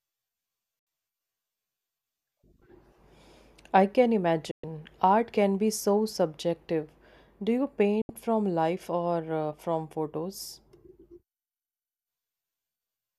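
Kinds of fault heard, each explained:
Digital broadcast dropout: The receiver lost valid frames and muted until good ones returned. The speech cuts to silence three times, with a very fast fade of about 3 ms. The holes fall at 0.79 to 0.87 s, at 4.51 to 4.64 s just after "I can", and at 8.02 to 8.10 s just before "from life". They last 72, 120 and 72 ms. The sound that was sent during each gap is lost.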